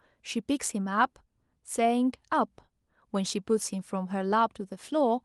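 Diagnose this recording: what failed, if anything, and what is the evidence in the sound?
Nothing stood out on listening to this speech recording; I found nothing that points to a failure at any stage of the chain.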